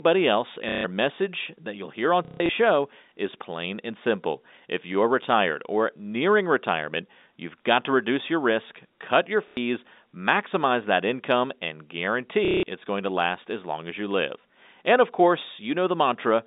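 Speech carried over G.711 telephone coding has short robotic stutters at 0.69–0.84, 2.25–2.49, 9.48–9.57 and 12.45–12.63 s. They come from packet loss with the last packet repeated: lost audio, which fits 30 ms packets, was filled by replaying the previous one.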